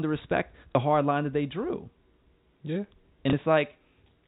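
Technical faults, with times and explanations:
0.72 to 0.75 s and 3.30 to 3.33 s: packet loss with last packet repeated. Right after "to respect" and again later, about 30 ms of audio drops out and the receiver just replays the previous chunk, which fits a 30 ms packet size. Each single replay comes through as a small blip.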